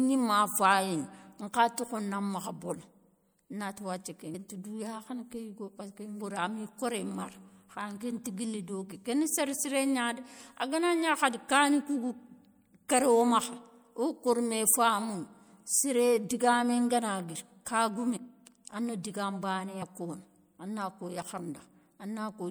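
Whole compressed frames went missing or were rejected by the decoder as damaged, so compressed frames were skipped at 4.33, 6.21, 18.16, 19.81 and 21.37 s. Each time the speech lurches forward, losing about 150 ms at 4.33 s, about 200 ms at 6.21 s and about 100 ms at each of the last three, jumps that fit a 24 ms frame length.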